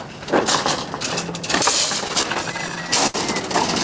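From 2.08 s to 3.16 s the sound catches and drags in a run of 13 short hitches, the longest about 72 ms, so that stretch feels halting and slightly slowed. These are repeated stalls (stutter): packets reached the receiver late, its jitter buffer kept running dry, and each time it stretched the last bit of audio to cover the wait. Roughly a fifth of that span, 200 ms in all, is filled this way, with nothing actually lost. The sound also stops at 8 kHz, as the call codec passes it.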